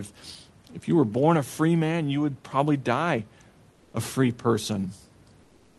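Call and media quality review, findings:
Comfort noise in place of the background, 3.71–3.93 s, between "you would probably die" and "a free": room tone turns flat and featureless for 0.22 s, about 3 dB quieter. Likely Opus DTX: sender pauses transmission in the silence, receiver synthesises shaped noise.

Same comfort noise from 5.41 s to the end, 0.38 s: steady, detail-free hiss about 4 dB below the real background. Likely silence frames dropped at the sender, receiver-generated noise substituted.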